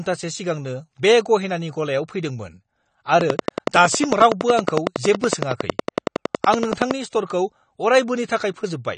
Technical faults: AAC compression; train of clicks

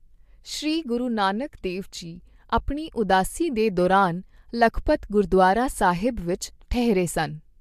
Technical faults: none

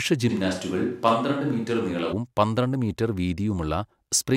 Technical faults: switch to a distant microphone

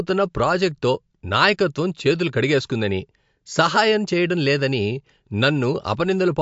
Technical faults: MP3 compression

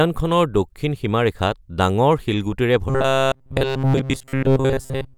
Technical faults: robotic sound from repeated short buffers

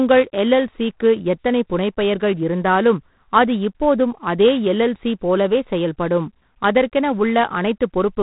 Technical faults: G.726 ADPCM

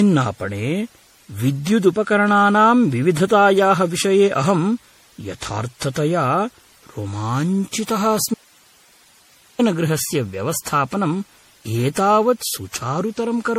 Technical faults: generation loss; audio dropout to a faint residue

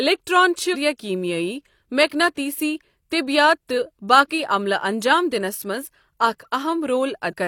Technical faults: compressed frames skipped

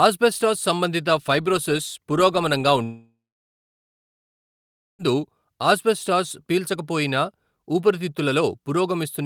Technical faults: long network dropout

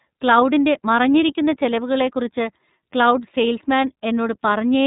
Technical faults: iLBC codec

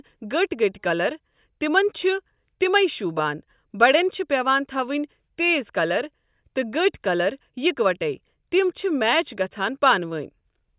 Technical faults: none

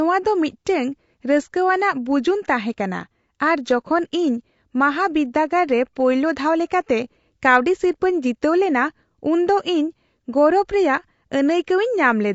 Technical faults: low-delay AAC compression

